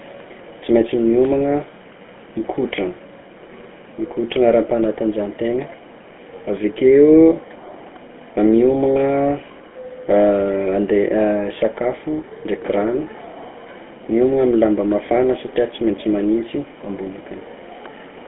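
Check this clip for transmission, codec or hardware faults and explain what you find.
One codec fault runs through the whole recording. The speech sounds buzzy and gravelly throughout, narrowed to roughly 200 Hz to 3.4 kHz: GSM full-rate coding, fitting 13 kbps, rebuilds the voice from a vocal-tract model driven by coarse, regularly spaced pulses.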